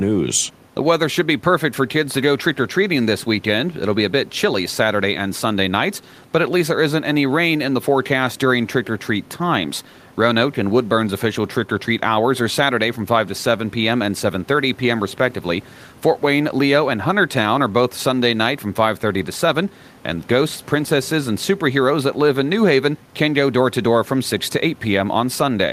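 No technical faults are audible anywhere in the recording.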